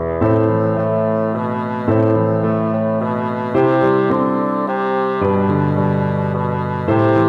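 Hard clipping turns up five times, at 0.23–0.49 s, 1.88–2.16 s, 3.57–4.15 s, 5.25–5.80 s and 6.89–7.22 s. The peaks overran a stage's ceiling by about 2 dB (about 3 dB in the last one) and got squared off, so you get crackly edges on the loud bits.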